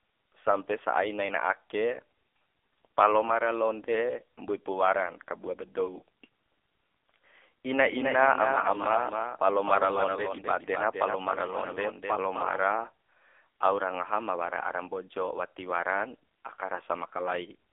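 AMR narrowband mobile codec damage runs throughout this speech clip. Nothing passes above 3.5 kHz, the band is held to roughly 300 Hz to 3.5 kHz, and the heavy buzzy, synthetic texture of the pulse-driven vocal-tract model fits a low mode near 6.7 kbps.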